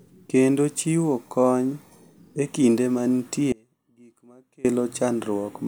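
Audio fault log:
3.52–4.65 s, audio dropout to a faint residue: the speech cuts out abruptly for about 1.12 s and returns just as suddenly. The gap is not silent; a faint sound remains, roughly 25 dB below normal level. The hard edges and faint residue, rather than a pause or fade, point to the wanted feed likely being lost upstream while the following path stayed live and passed only a low-level residue.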